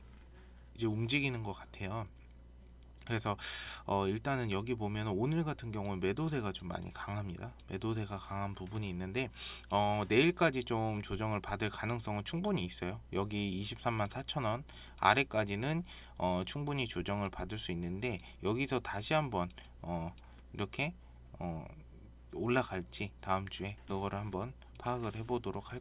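No dropouts, glitches, distortion or level problems can be heard anywhere in the recording.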